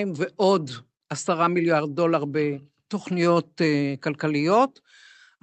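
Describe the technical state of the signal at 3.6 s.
At 3.6 s the speech is intact, with no dropout, glitch or distortion, only the ordinary coding character of the call path it travelled through.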